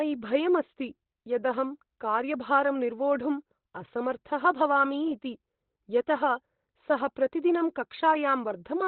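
Muffled, hoarse and boxy from start to finish, the speech has nothing above about 4.2 kHz, so consonants lose their edge and the voice sounds as if heard down a telephone line. The damage is heavy and constant. The likely cause is Opus compression at a very low rate, around 12 kbps, where the encoder drops into its narrowband speech (SILK) mode and models the voice coarsely instead of keeping its full spectrum.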